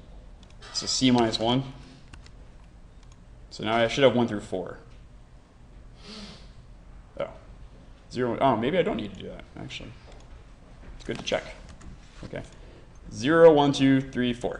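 No technical faults are audible.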